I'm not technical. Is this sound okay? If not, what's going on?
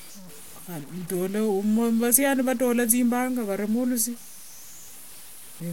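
No, there's a grainy, gritty edge on the speech from start to finish, and it gets rougher as the voice trails off into quieter moments. That's most likely low bit depth without dither, meaning the sound was stored with too few volume steps, which fits roughly 7 bits, and chopped rather than smoothed.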